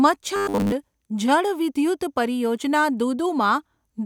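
Speech with robotic sound from repeated short buffers between 0.36 and 0.72 s: a rigid 100 Hz buzz, most likely from re-played 10 ms chunks, unlike codec warble, whose pitch follows the voice.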